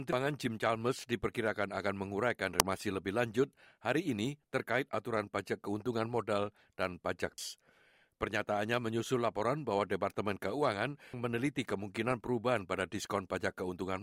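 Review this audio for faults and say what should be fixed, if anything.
Damaged data in a compressed stream causes brief glitches at 0.13, 7.38 and 11.14 s and a longer disturbance from 2.26 to 2.60 s. Each time, the decoder misreads frames and resyncs at the next frame header. Verify checksums in transfer and storage, and re-fetch any stream segments that arrive corrupted.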